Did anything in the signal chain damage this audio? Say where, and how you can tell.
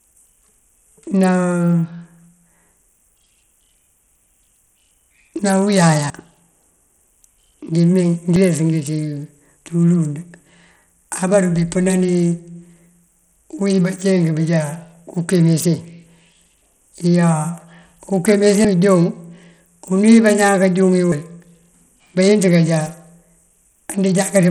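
Yes. Across the whole speech clip the treble flickers and drops out, and a gritty, aliased grain rides on the sound. That points to the codec stage, likely Bluetooth SBC compression at a low bitrate around 80 kbps, starving its top sub-bands. Unlike an MP3-style codec, there's no smeared swirling, just coarse, crunchy quantisation.

At the driver or buffer stage there are sudden forward jumps at 6.10, 8.36, 18.65 and 21.12 s. The longest loses about 150 ms, the shortest about 40 ms. These are likely dropped buffers (overrun): samples were overwritten before collection and the two sides joined directly. There is no silent gap.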